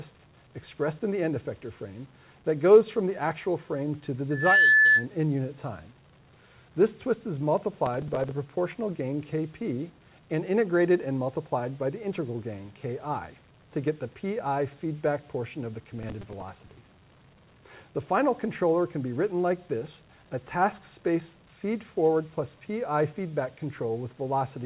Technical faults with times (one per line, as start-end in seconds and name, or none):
4.30-5.06 loudspeaker feedback squeal
7.86-8.31 processor overload crackle
15.99-16.86 processor overload crackle